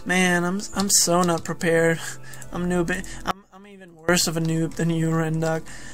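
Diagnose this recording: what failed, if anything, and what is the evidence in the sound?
An audio dropout to a faint residue runs from 3.31 to 4.09 s, about 0.78 s. The sound cuts out abruptly mid-flow, leaving only a faint trace roughly 25 dB down. The cause is likely an intermittent analogue connection upstream while the downstream path stayed live. The hard edges rule out a pause or fade, and the remaining trace rules out a digital mute.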